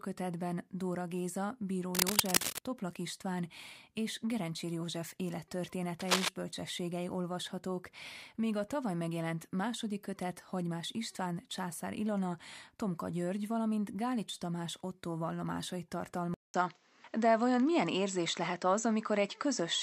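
From 1.95 to 2.67 s, and again from 6.00 to 6.28 s just before "bölcsességei olvashatók míg a", cable scratch noise rides over the speech, a little louder than it. It is dense, uneven rustling rather than isolated clicks, likely from a worn, moving contact.

At 16.34 s the input switched to a poorer device, likely. A 200 ms silence is followed by audio with nothing above 7.9 kHz, a level shift of about 5 dB and a faint new background noise. The gap and the changed noise floor distinguish this from a simple filter.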